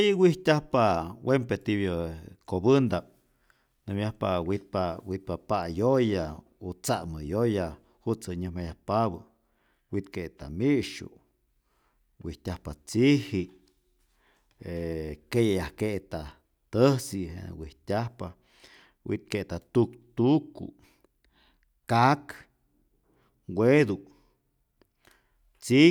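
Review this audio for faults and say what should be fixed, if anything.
Nothing to fix here: no faults are audible anywhere in the speech, so no action is needed.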